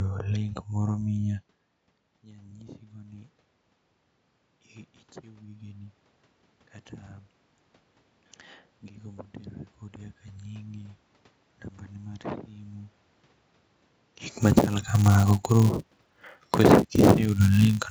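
At 2.24 s the automatic gain starts rising. The input level had fallen by about 22 dB, after the talker moved away from the microphone shortly before. The automatic gain control judged the signal too quiet and raised its gain. It does this gradually, reaching about 4 dB more by 3.39 s. The voice and the room noise swell together over roughly a second. The level creeps upward instead of jumping.

From 14.33 s to the end, the filter is restarted on every block. It loses its memory at each block boundary and begins again from silence. Each block therefore opens with a small transient. These repeat at 188 Hz, which fits a 256-sample block. The result is a steady buzz under the speech. It grows louder and softer with the signal, strongest where the speech is loudest.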